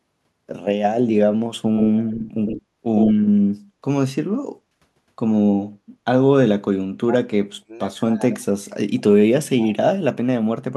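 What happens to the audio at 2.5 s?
At 2.5 s the speech carries an echo leak, running from 1.76 to 2.62 s: a distinct second copy of the speech trails the original by about 109 ms, roughly 10 dB quieter. The likely cause is a far-end speakerphone whose echo canceller let some of its microphone pickup through and sent it back. Unlike room reverberation, which smears into a continuous tail, this is a discrete, repeated copy with a fixed lag.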